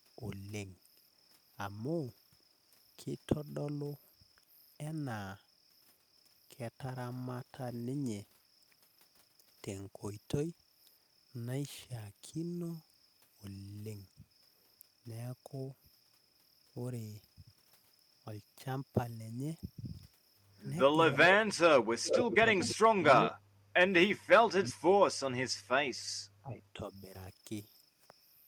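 From 21.13 s onward, both ends of the call appear to talk at once, and the echo canceller likely cannot tell the local talker from loudspeaker echo, so it turns everything down. That is speech suppressed in double talk. The first two dips, at 21.13 to 21.36 s and 22.09 to 22.44 s, are shallow, only a few decibels. At 22.75 to 23.44 s the speech falls much deeper, about 30 dB. At 24.15 to 24.99 s it drops out almost completely. A short cut follows at 25.33 to 25.39 s, and a moderate dip comes at 26.42 to 27.12 s.

Overlapping this stretch is an echo leak. The far side's canceller likely fails to remove what its microphone picks up from its loudspeaker, so the voice returns about 384 ms late. From 22.03 to 22.74 s the delayed copy is fairly strong, only about 5 dB under the speech. A weaker scrap, about 10 dB down, follows at 23.22 to 23.3 s.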